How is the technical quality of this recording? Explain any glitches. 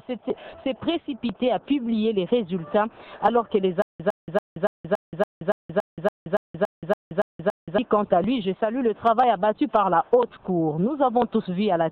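The playback stalls once, producing a stutter with silent gaps from 3.82 to 7.78 s. The stream likely stalled and replayed its last fragment on each retry: a 108 ms burst repeats 14 times every 283 ms, separated by 175 ms of dead silence, and the audio meant for that stretch is lost.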